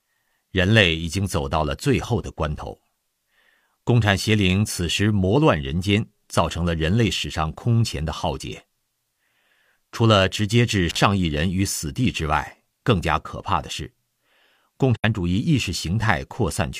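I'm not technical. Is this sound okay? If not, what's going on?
No. Intermittent contact at about 10.89 to 10.97 s: a loose cable or plug briefly lost connection, so the speech cuts out for roughly 44 ms, with crackle at the edges.

AAC frame loss with muting at about 14.95 to 15.04 s: chunks of the compressed audio went missing and were replaced with silence, leaving an 85 ms gap that fades out and back in. This fits two lost frames.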